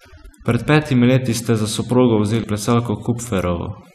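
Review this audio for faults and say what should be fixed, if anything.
Overdone noise removal, throughout: the noise reducer was set so strong that any frequency band near its noise estimate is pushed down or off, taking quiet speech detail with it. The background drops and breaks up into twinkling specks. A gentler reduction setting, checked by ear, would prevent it.

Damaged data in a compressed stream, at 2.41 to 2.44 s: corrupted bytes make the decoder misread frames and lose sync until it finds the next frame header. That brief breakdown is heard as a short glitch. Transferring and storing the file with integrity checks such as checksums would prevent it.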